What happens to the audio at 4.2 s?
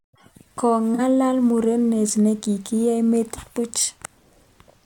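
Nothing goes wrong at 4.2 s; the speech there plays through intact, with no dropout, click or distortion.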